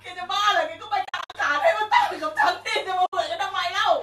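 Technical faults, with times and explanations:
1.05 to 1.35 s and 3.06 to 3.13 s, AAC frame loss with muting: in the first stretch, about 200 ms of audio drops out in several gaps spread over 300 ms, the longest around 70 ms. At 3.06 s a single 70 ms hole follows. The decoder zeroes the missing spectrum, and the overlapping windows fade each gap out and back in, so the holes have soft edges. The short gaps fit the 10 ms frames of the likely low-delay AAC encoding.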